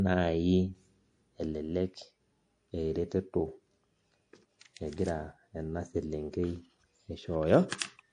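MP3 compression runs through the whole clip, from start to finish, and is likely the cause of the plainly audible damage to the speech. Nothing reaches above about 10.9 kHz, where the encoder appears to have cut the treble to save bits, a limit that fits a rate around 48 kbps. Weak frequency lines drop in and out between frames, giving the speech a watery, swirling quality, with metallic chirps on s sounds and softened consonant attacks.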